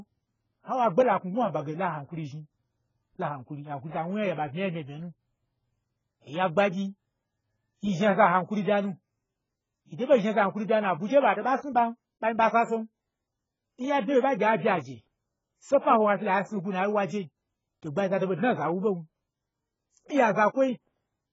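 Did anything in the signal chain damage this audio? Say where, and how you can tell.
Yes: the speech sounds dull and smeared throughout, with nothing above 7.6 kHz. This is likely heavy AAC compression at the codec stage, fitting a very low bitrate.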